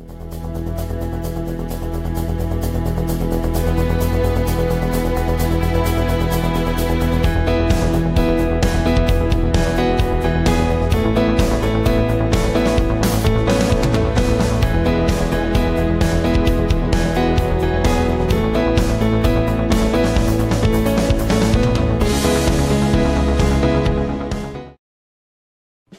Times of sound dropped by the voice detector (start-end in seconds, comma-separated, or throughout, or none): none